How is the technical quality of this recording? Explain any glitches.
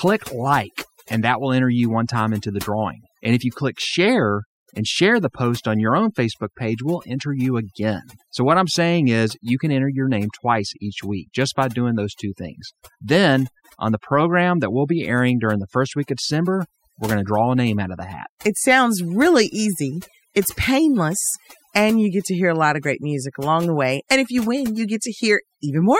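The main problem is overdone noise removal, running through the whole speech clip. The noise reduction was pushed too hard, so frequency bands near the noise floor get switched off, taking softer parts of the voice too. The result is a hushed background with twinkly specks.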